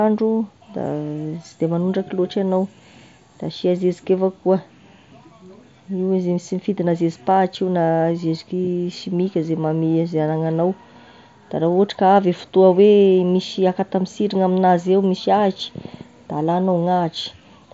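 No technical faults can be heard in this speech, which comes through a Bluetooth mSBC headset link with nothing above 7.7 kHz.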